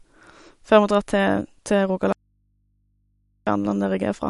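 A short speech recording sounds watery and swirly throughout, with smeared consonant attacks and nothing above 11.2 kHz. This is plainly audible MP3 compression, likely from a low bitrate that fits roughly 48 kbps, where the encoder cut the treble and let weak frequency lines flicker between frames. From 2.13 s to 3.47 s the speech cuts out abruptly for about 1.34 s, leaving only faint mains hum roughly 45 dB below the speech before it snaps back. This is an audio dropout to a faint residue: the signal was likely lost while the downstream input stayed live and picked up hum.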